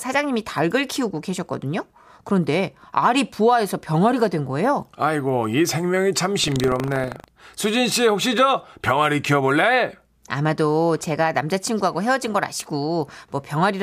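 Speech, with a stretch of buffer tearing from 6.4 to 7.29 s: a robotic rattle at 25 Hz, a pair of hard joins every 40 ms, present only while the voice is sounding. The writing program and the playback hardware have slipped so that they cross inside each period, leaving a small sliver of each buffer holding audio from about 150 ms earlier. Dropouts would leave silent gaps. Here the sound never goes silent, only a steady buzz of stale fragments.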